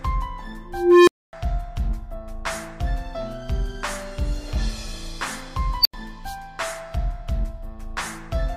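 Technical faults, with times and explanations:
0.68–1.33 s and 5.81–5.94 s, unstable filter: a recursive filter with bad coefficients runs away. First a tone around 400 Hz swells over 0.39 s, clips, then drops to 0.26 s of silence. Later a squeal around 5 kHz blows up in 37 ms, followed by 85 ms of silence.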